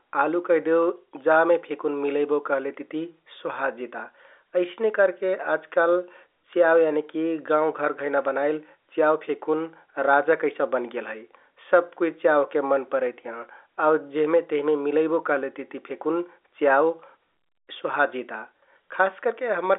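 No technical faults can be heard in this speech recording. It is carried over G.711 telephone coding, so the sound is held to a narrow band of roughly 300 Hz to 3.6 kHz with nothing above about 3.8 kHz.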